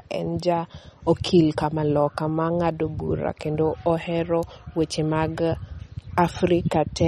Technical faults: MP3 compression

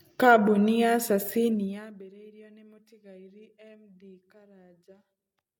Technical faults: zipper noise

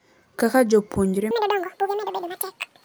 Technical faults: audio read two samples at a time (double speed)

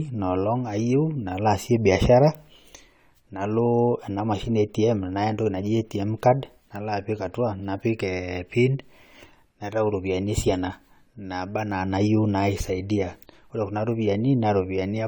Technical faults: generation loss

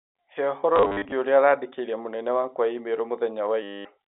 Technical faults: packet loss with last packet repeated

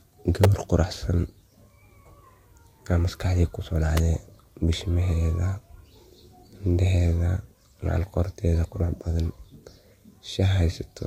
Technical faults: electrical switching spike

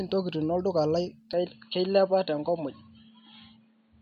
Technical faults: input switched to a poorer device

